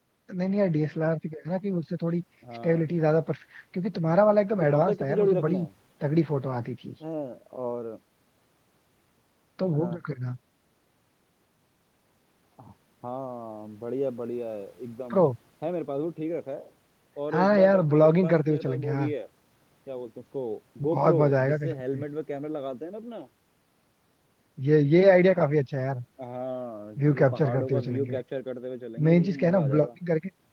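No technical faults are audible.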